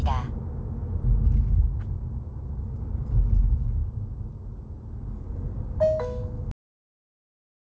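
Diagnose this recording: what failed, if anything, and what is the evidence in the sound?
Jitter buffer speed-up in the receiver's buffer: repeated pitch-period cuts, about 150 ms in total, make 1.16 to 3.09 s run 8% fast at unchanged pitch.

Cut-off end at playback: the final buffers were never played, so at 6.51 s the sound stops mid-event and drops straight to digital silence without decay.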